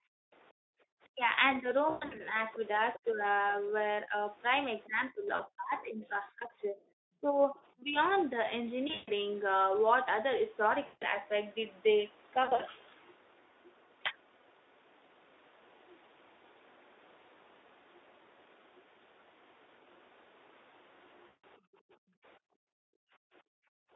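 From 0.00 to 0.84 s, and again from 21.59 to 23.93 s, the background is gated by the echo canceller. It pulls the microphone down by about 40 dB while the loudspeaker plays, so the room sound drops out for roughly 0.7 s early and about 2 s at the end.

Between 1.12 and 3.23 s, the speech dips by roughly 15 dB, likely speech suppressed in double talk. Between 4.86 and 7.96 s it dips by roughly 25 dB over about 2 s. The canceller mistakes the talker for echo and attenuates both sides.

VoIP packet loss concealed by the speech codec affects six spans. The first, at 1.89 to 2.21 s, is 200 ms lost over 280 ms, with a longest gap of 120 ms. The others are 5.35 to 5.42 s (40 ms), 8.87 to 9.10 s (160 ms, longest 140 ms), 10.85 to 11.04 s (160 ms), 12.43 to 12.62 s (100 ms in short gaps), and 21.27 to 21.44 s (160 ms). The decoder extrapolates from its last pitch and filter, so the sound turns buzzy and fades, then stays weak briefly afterwards.

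From 2.95 to 2.99 s, a scrap of a second voice sits roughly 20 dB below the speech, likely the other side's voice leaking through as residual loudspeaker echo.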